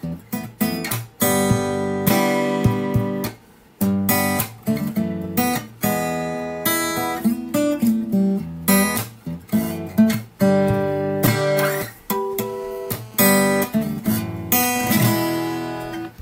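From 12.45 to 13.47 s a GSM phone buzz appears, a hard, raspy 217 Hz rasp with dense harmonics, about 25 dB below the signal, as nearby call bursts are rectified.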